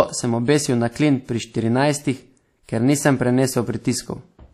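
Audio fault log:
Throughout, WMA compression: the speech carries plainly audible ringing and a washy hiss that swells and falls with the signal, and nothing remains above 15.2 kHz. This points to a transform codec, likely WMA at around 48 kbps, zeroing weak spectral lines and smearing quantisation noise across long blocks.
2.63–2.69 s, pre-echo: right after "na klin pri štirinajstih" and before "ker nisem", a hiss runs about 56 ms ahead of a sharp onset, which then sounds softened. The attack sits late in a codec block, so noise sized for it fills the quiet lead-in too.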